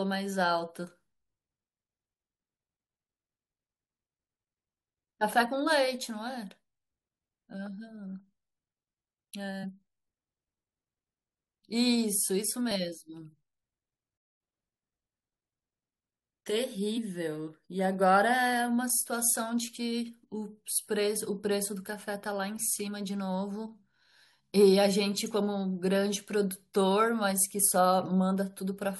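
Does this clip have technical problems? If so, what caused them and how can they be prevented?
Yes. Three kinds of fault can be heard in this speech clip.

Damaged data in a compressed stream appears twice. There is a short blip from 9.63 to 9.65 s and another at 27.67 s. At each point, some bytes in the encoded stream were corrupted. The decoder could not read those frames and lost its place. It then searched ahead for the next valid frame header. Prevention: send the stream over a checked, reliable transport and verify file integrity.

A playback stall occurs from 14.17 to 14.41 s. The speech stops dead for about 0.22 s and then resumes. The likely cause is that the player's buffer ran dry, or its audio thread was blocked and could not feed the output in time. Either way, nothing reached the output until data flowed again. Prevention: use a larger playback buffer and keep the audio thread at high priority, free of blocking work.

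Catch-up at higher speed follows right after the stall, from 14.41 to 14.63 s. The player resampled its backlog to run at twice normal speed, which recovered the lost time quickly. Because speed and pitch rose together, the voice jumped up by around ten semitones and sounded chipmunk-like before dropping back. Prevention: catch up with gentle, pitch-preserving time-stretching, or simply skip ahead instead of racing through the backlog.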